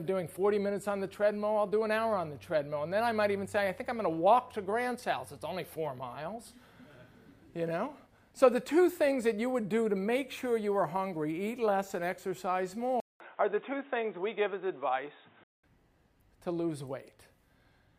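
At 13.00 s the audio drops out for about 200 ms. It returns dull and boxy, with nothing above 3.8 kHz. A faint new noise sits far beneath it, roughly 40 dB down. The level barely changes. This is likely an input switched to a poorer device, such as another microphone or a headset's call profile with a narrower band. At 15.64 s the full, brighter tone comes back.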